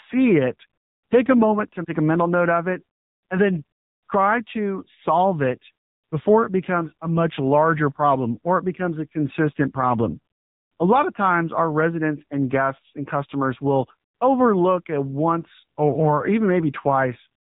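Throughout, the speech carries AMR narrowband mobile codec damage: nothing above 4 kHz, and a plainly buzzy, synthetic timbre fitting a low rate near 7.4 kbps, unlike simple band-limiting. AMR bit errors strike at 1.38–1.46 s and 15.48–15.63 s, where a few percent of flipped bits turn the voice hoarse and gargly while pitch and level hold, unlike dropouts.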